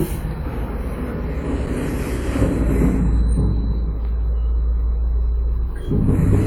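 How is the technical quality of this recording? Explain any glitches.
One glitch stands out: a brief dropout at about 1.66 s. It is a block of digital silence lasting roughly 5.3 ms, short enough to register as a tick or dip rather than an audible hole. The audio cuts out abruptly and back with no fade. The most likely cause is the playback or processing stage failing to fill its output buffer in time, and the gap's length fits a 256-sample buffer.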